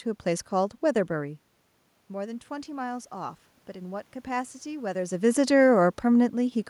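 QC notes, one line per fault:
2.09–5.22 s, automatic gain rising: the voice and the room noise behind it swell together, slowly, over about three seconds, a lift of about 4 dB. After the talker moves back from the microphone around 1 s, the input falls by about 13 dB. The automatic gain control reads that as too quiet and raises its gain gradually, so the background rises right along with the voice until the talker shifts again near 5 s.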